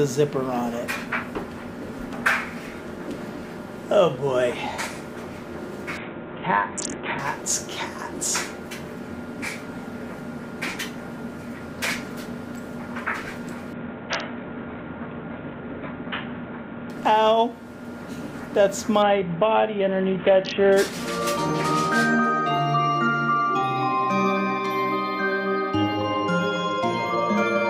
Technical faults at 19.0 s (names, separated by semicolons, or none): Bluetooth SBC bit pool drop